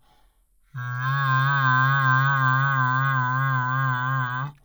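From the first moment to the end, the music runs at half speed and sits a full octave low, the mark of stereo read as mono: alternating left and right samples were taken as one channel. Unlike a plain sample-rate mismatch, a faint mirrored copy also rings in the upper spectrum.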